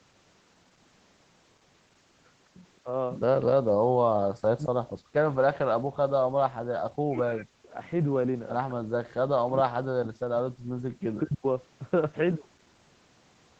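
A speech clip. From 10.95 to 11.46 s the voice drops steeply, by about 40 dB at worst. This is likely speech suppressed in double talk, with the echo canceller turning the talker down.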